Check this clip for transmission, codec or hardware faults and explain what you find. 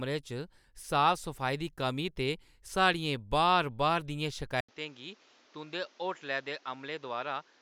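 One fault is present. From 4.61 s, after an 80 ms gap, the speech loses everything above 7.4 kHz, drops about 5 dB and picks up a new noise floor, likely from the input being switched to a poorer device.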